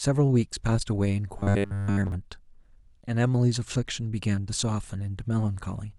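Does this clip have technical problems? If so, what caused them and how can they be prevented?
Yes, from 1.39 to 2.12 s the speech turns into a rigid, metallic buzz around 100 Hz. That's robotic sound from repeated short buffers, likely caused by audio arriving too seldom, so roughly 10 ms chunks got replayed over most of that stretch. A larger jitter buffer, or a steadier network and audio thread, would stop it.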